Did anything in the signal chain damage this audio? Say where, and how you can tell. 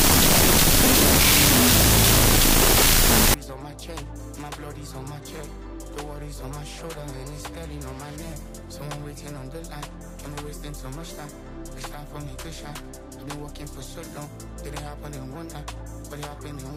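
Yes. From 0 to 3.34 s a wrong sample width at the sample-format conversion stage buries the sound in loud broadband noise. It plays at half speed, an octave low, which fits 16-bit data read as unsigned 8-bit. A spectrogram shows a bright noise wash over faint lowered harmonics.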